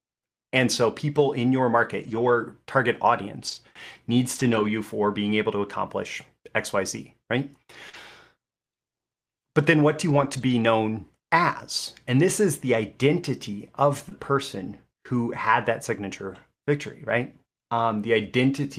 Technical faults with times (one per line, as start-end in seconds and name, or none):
1.99-2.37 lost packet rebuilt from error correction
3.47-3.57 lost packet rebuilt from error correction
4.35-4.69 lost packet rebuilt from error correction
7.89-7.95 short concealed packet loss
7.93 lost packet rebuilt from error correction
10.09-10.51 lost packet rebuilt from error correction
14.09-14.13 short concealed packet loss
14.11 lost packet rebuilt from error correction
15.13-15.19 lost packet rebuilt from error correction